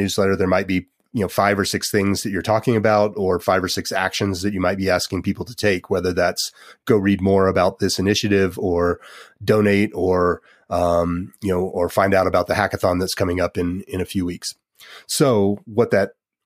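Speech recording whose signal shows no technical faults at any point.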